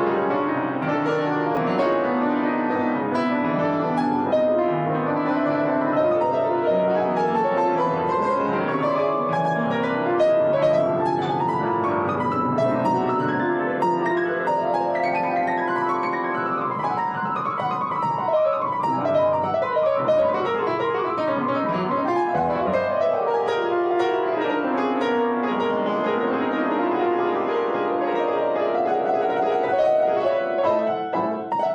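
At 1.55 to 1.57 s there is a brief jumbled moment, a tiny scramble lasting about 20 ms. This is a case of chunks out of order: one 10 ms chunk of audio arrived late and played one chunk behind where it belonged, so it swapped places with its neighbour. No audio goes missing, but the reordering creates three abrupt joins where the waveform doesn't line up.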